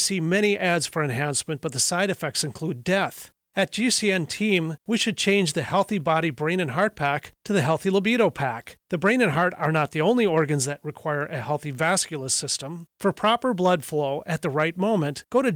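No technical fault can be heard anywhere in the speech. Nothing in the recording calls for a time stamp or a repair.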